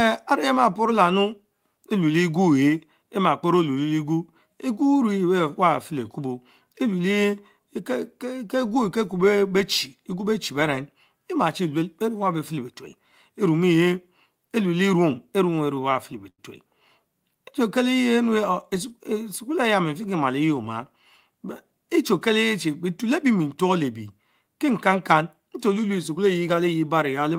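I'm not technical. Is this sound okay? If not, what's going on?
No. Repeated stalls (stutter) from 15.55 to 16.40 s: the audio arrived late eight times, so the player stretched the last sound to fill the gaps, making speech drag and stutter.

Jitter buffer speed-up from 25.68 to 26.19 s: with too much speech waiting in line, the player trimmed out about a twentieth of a second, so it sounds about 8% faster and hurried.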